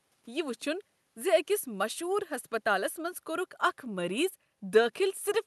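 No technical faults can be heard anywhere in the speech. It has come through a call codec path, and the top end stops at about 12 kHz, which fits an Opus stream running at superwideband bandwidth.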